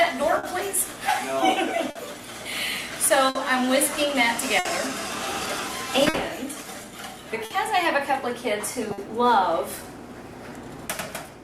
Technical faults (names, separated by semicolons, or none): clock drift between sender and receiver; repeated timing corrections; short stall from a late packet